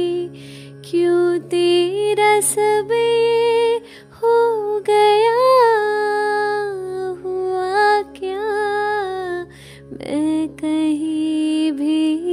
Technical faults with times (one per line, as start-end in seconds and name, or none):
none